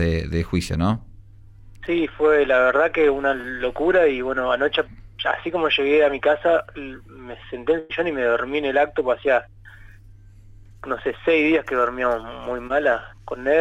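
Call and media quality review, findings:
Short concealed packet loss at 3.41 s and 12.67 s: quick smear or wobble, roughly 20 ms each. Network drop, papered over by the decoder's concealment: it stretched the previous sound across the hole, then crossfaded back in.

Burst of packet loss at 7.79–7.91 s: about 100 ms gone, audible as a held buzz or hiss sagging in level, then a jump ahead. Consecutive packets were dropped or arrived late. Concealment extended the last sound and faded it, so that stretch is simply missing.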